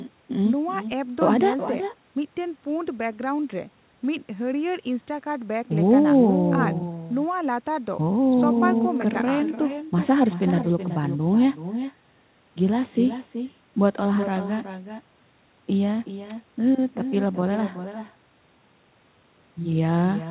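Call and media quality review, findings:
Echo with no canceller, throughout: far-end loudspeaker audio re-captured by its microphone and returned unsuppressed. Every phrase shadowed around 0.4 s later by a thinner copy, about 10 dB down, within narrowband audio topping out at 4 kHz.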